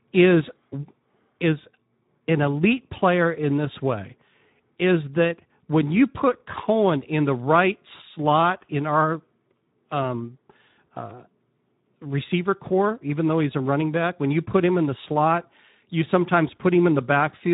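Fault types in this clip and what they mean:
Speex codec: a CELP speech codec at roughly 11 kbps, starving the excitation so speech sounds noisy and hoarse throughout, with plainly audible coding damage.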